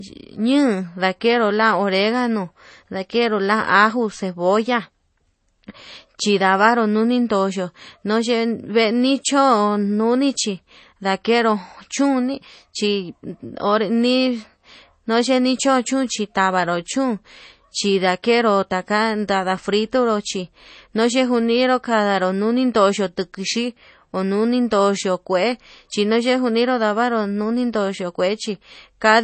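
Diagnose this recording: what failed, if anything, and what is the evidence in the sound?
The codec stage failed, with MP3 compression the likely cause. Throughout the speech, nothing survives above about 8.3 kHz, and the damage is plainly audible as a watery texture where weak frequency lines drop in and out. That points to a bitrate around 32 kbps.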